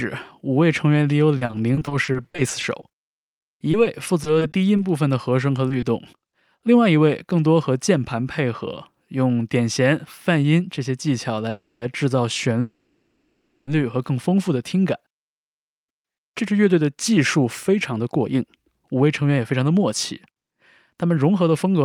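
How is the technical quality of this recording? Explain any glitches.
The recording has clear network-related faults of three kinds: a choppy robotic stretch, two hurried passages, and two stalls.

Repeated packet loss (robotic sound) runs from 1.37 to 5.85 s. About two dozen short holes, none longer than 40 ms, are patched by extending the preceding sound. That concealment covers about 14% of the stretch, so the speech turns choppy with fragments missing.

A jitter buffer speed-up occurs at 9.92 to 10.81 s and again at 16.31 to 21.84 s, both at 107% speed. The receiver trimmed pitch-period-sized pieces to shrink excess buffering, removing about 70 ms and then about 400 ms. Speech sounds rushed while its pitch stays unchanged.

Call audio freezes occur at 11.50 to 11.84 s and 12.60 to 13.69 s. The last sound is stretched into a fading buzz or hiss that drops to silence for 70 ms and 360 ms respectively. 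Playback then resumes where it stopped, with nothing lost. The likely cause is delayed packets draining the jitter buffer.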